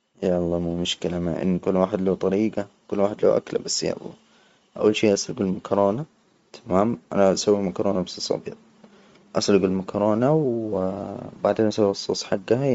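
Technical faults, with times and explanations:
Throughout, Bluetooth LC3 compression: the speech has a breathy, grainy edge, and nothing reaches above 7.7 kHz. The likely cause is a low-bitrate LE Audio transform codec that drops much of the upper spectrum and fills the gaps with shaped noise, consistent with roughly 32 kbps in 10 ms frames. On a spectrogram the band stops at a flat ceiling near 7.7 kHz, with blotchy, noise-like patches beneath it changing in small time blocks.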